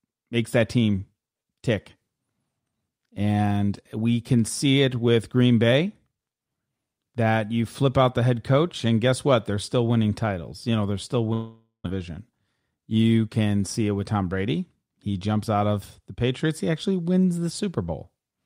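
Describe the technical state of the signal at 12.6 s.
At 12.6 s the speech is inside a jitter buffer speed-up that runs from 11.96 to 12.77 s. The receiver's buffer had filled beyond its target, so it trimmed short slices of one or a few pitch periods, again and again, to catch up. About a tenth of a second was cut in total. Playback runs at about 112% speed with the pitch unchanged. The speech sounds hurried through this stretch.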